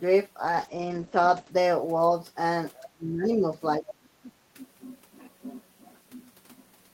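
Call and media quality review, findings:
Call bitrate drop, 0.46 to 1.57 s: speech turns rough and muffled. Encoder falls from 32 to 12 kbps for about a second, bandwidth cut from 20 kHz to 8 kHz.

Other side's voice leaking through, 2.75 to 2.9 s and 3.88 to 3.93 s: faint second voice, about 20 dB under speech. Likely loudspeaker echo the echo canceller left behind.

Speech suppressed in double talk, 2.93 to 3.42 s and 3.78 to 4.06 s: talker dips deeply, then more mildly. Likely echo canceller attenuating both sides while the far end talks.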